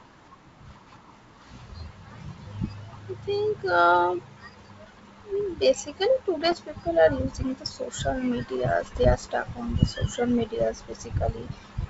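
From 6.41 to 6.60 s, and again from 8.83 to 9.05 s just before "are stuck", bit errors on an ADPCM link cause pops and rough bursts. Each flipped bit throws off the decoder's step size and predictor, so the damage rings on briefly. On a waveform these show as jagged spikes with sudden level jumps, and on a spectrogram as broadband vertical smears.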